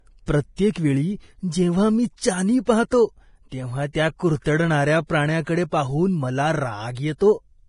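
Throughout, heavy coding, likely Vorbis compression at a rate fitting 30 kbps, removes everything above 10.5 kHz and leaves the speech's treble hissy and grainy.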